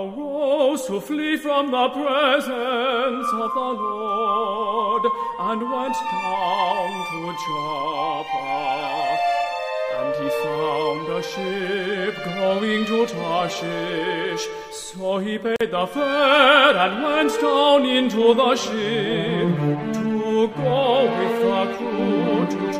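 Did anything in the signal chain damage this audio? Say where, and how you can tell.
Yes. At the codec stage, a gap at a join of encoded pieces opens at 15.56 s and lasts about 44 ms until 15.61 s. The sound stops with smeared edges, then resumes where it left off. Each separately encoded piece kept its start-up delay and padded final frame.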